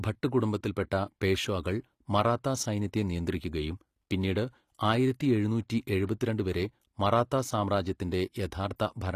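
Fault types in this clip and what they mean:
HE-AAC compression: likely cause of gritty, lispy s sounds in this speech; a spectrogram shows smeared, copied-looking treble bands and nothing above 14.9 kHz.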